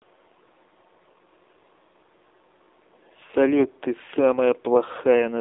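AMR narrowband mobile codec damage throughout: speech squeezed into a 300 Hz to 3.7 kHz band turns buzzy and synthetic, consistent with low-bitrate AMR-NB near 7.4 kbps.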